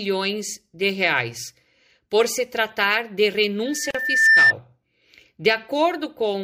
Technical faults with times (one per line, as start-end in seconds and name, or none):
3.65-4.53 loudspeaker feedback squeal
3.91-3.95 gap at a join of encoded pieces